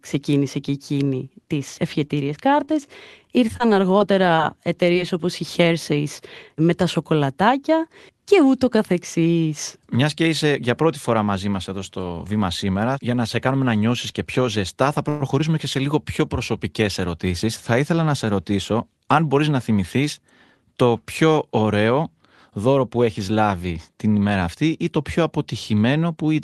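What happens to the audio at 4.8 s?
At 4.8 s, scattered short gaps (3.48–4.97 s, before "όπως η"): a handful of packets, each lost or late, are patched by extending the previous sound, leaving brief ticks or smears, never a single long dropout.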